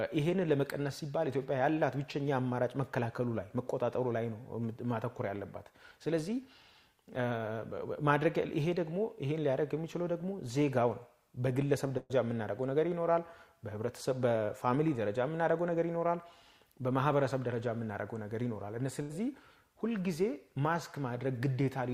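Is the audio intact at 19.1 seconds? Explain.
No. A burst of packet loss runs from 19.02 to 19.11 s. Consecutive packets failed to arrive in time, so the receiver stretched the last received sound across about 76 ms, fading it down, and then resumed playback with roughly 80 ms of audio skipped.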